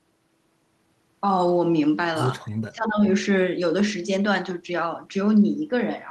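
From 2.69 s to 3.04 s the speech sinks by as much as about 25 dB for roughly 0.4 s before returning to full level. This is speech suppressed in double talk, likely caused by the echo canceller meeting simultaneous speech from the far end: unable to tell the near talker apart from loudspeaker echo, it clamped down on the whole signal, taking the wanted speech with it.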